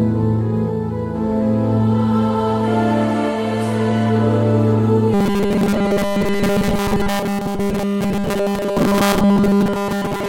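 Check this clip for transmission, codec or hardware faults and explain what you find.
One fault is present: robotic sound from repeated short buffers, running from 5.14 s to the end of the clip. The sound turns into a rigid, metallic buzz fixed at 200 Hz that only loosely tracks the underlying audio. The likely cause is new audio arriving too seldom, so the playback repeats a tiny slice, about 5 ms given that 200 Hz pitch, to fill the gaps. Most of the time in this stretch is filled by those repeats rather than by fresh audio.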